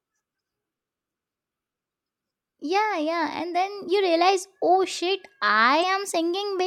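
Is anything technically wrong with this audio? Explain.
Yes. From 5.80 to 5.84 s there is damaged data in a compressed stream: corrupted bytes made the decoder misread those frames and lose sync until it found the next valid frame header. In this speech clip that comes through as a brief 40 ms chirp, squawk, click or short hole.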